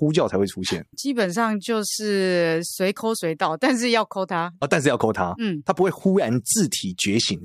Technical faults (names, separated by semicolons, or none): none